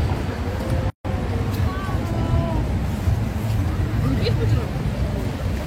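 At 0.90 s a gap at a join of encoded pieces opens, lasting about 147 ms until 1.05 s. Separately encoded pieces were joined untrimmed. The sound drops out, then resumes where it stopped.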